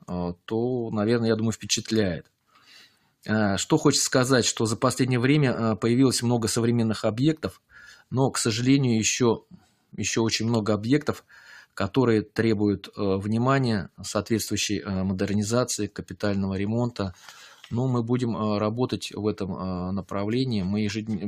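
At 2.5 to 2.7 s, 2.86 to 3.24 s and 9.42 to 9.95 s, sound is cut by the noise suppressor, which treats it as noise and pulls it down by about 9, 12 and 12 dB. Unlike a dropout, the sound sinks in level rather than vanishing.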